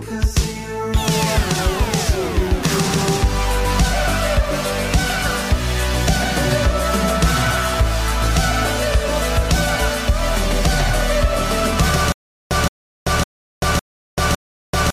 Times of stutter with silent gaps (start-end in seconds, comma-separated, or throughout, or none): 12.12-14.92